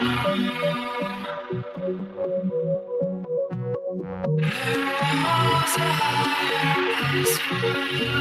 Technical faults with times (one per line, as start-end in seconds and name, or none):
0.00-8.20 noise suppressor applied to music or sounds
0.90-2.21 sound cut by the noise suppressor
2.79-2.94 sound cut by the noise suppressor
3.76-4.26 sound cut by the noise suppressor